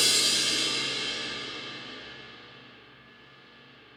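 No technical faults can be heard in this recording of sounds. Nothing at any point calls for a timestamp or a closer listen.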